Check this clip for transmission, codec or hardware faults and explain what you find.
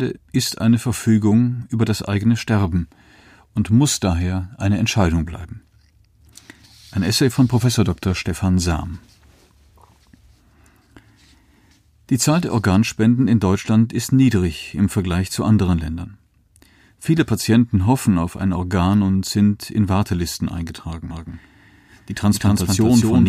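One fault appears near the end. From 21.10 s to the end there is a doubled audio track: a slower second capture path likely mixes in a copy, heard as an equally loud, dry repeat that cuts in abruptly about 200 ms behind.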